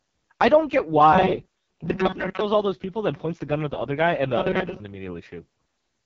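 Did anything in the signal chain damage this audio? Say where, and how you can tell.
Yes. The codec stage damaged the whole clip. The speech is rough and raspy from start to finish. Nothing reaches above 7.6 kHz. This is the AMR wideband (HD Voice) codec at heavy damage, and the harshness fits its lowest 6.6 kbit/s mode. The codec models speech up to 6.4 kHz with a pulse-driven vocal tract. It fills the band above that with shaped noise. At this rate there are too few bits, so the excitation turns coarse and buzzy.

The driver or buffer stage damaged two stretches, from 1.13 to 2.41 s and from 4.38 to 4.80 s. In both, the speech becomes a rigid, metallic buzz at a fixed 188 Hz. It still roughly tracks the speech. This is robotic sound from repeated short buffers. The likely cause is audio arriving too seldom, so the software loops the last small chunk while most of the real signal is skipped. 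A 188 Hz buzz points to a loop of about 5.3 ms.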